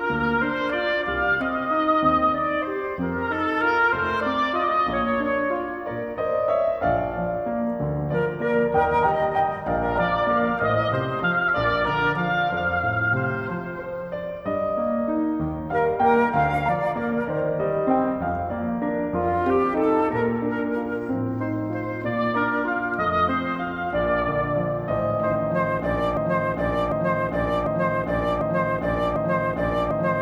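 From 26.17 s to the end, the sound sticks: a fragment of about 0.75 s plays over and over, back to back, repeating five times with no change between passes, so the clip closes on a stuttering broken-record loop rather than its real ending. Whatever should have played in those last seconds never arrives. The likely cause is a player, encoder or stream that stalled and kept resending the last piece of audio it had buffered.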